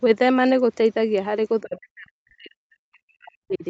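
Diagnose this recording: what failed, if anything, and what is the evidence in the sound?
The call processing stage failed here: the echo canceller likely could not separate the near talker from loudspeaker echo while both sides spoke, and attenuated both. The result is speech suppressed in double talk. From 1.61 s to 3.64 s the speech level collapses, by roughly 40 dB at its deepest, for about two seconds. The 8 kHz band limit from the Opus call path is audible throughout.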